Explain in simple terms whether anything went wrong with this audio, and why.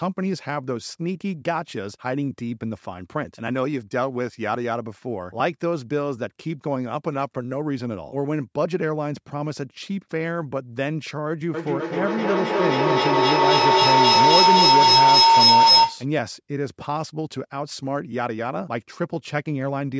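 From about 11.5 to 16.1 seconds, a shrill whistle around 1 kHz swells up until it is louder than the speech itself, pulsing roughly three times a second. This is a feedback howl. Two devices in the same room were on the call, so one device's loudspeaker fed straight back into the other's microphone. Each trip round that loop came back louder and narrowed to a single tone, about a third of a second per round, until the loop was broken.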